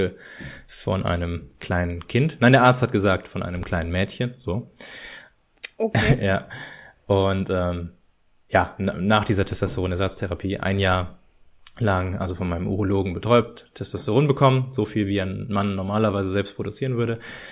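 No technical faults can be heard anywhere in this recording.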